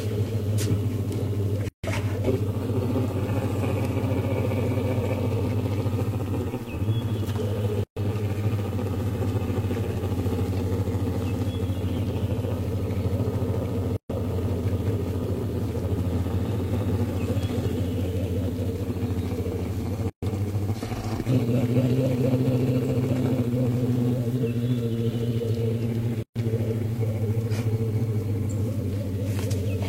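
Separately encoded pieces were joined without trimming the encoder's start-up delay or the padding on each piece's last frame, leaving a gap at each join of encoded pieces roughly every 6 s: 1.69 to 1.84 s (about 151 ms), then 7.84 to 7.97, 13.97 to 14.10, 20.10 to 20.23 and 26.23 to 26.36 s (130 ms each). The continuous sound abruptly drops to silence, with smeared edges, then resumes where it stopped.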